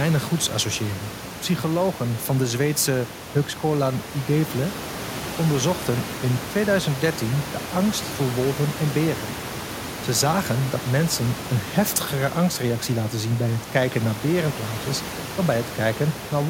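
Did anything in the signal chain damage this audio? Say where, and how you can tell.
No, the signal chain is intact.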